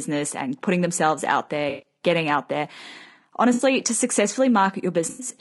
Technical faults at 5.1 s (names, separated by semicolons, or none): low-delay AAC compression; AAC frame loss with concealment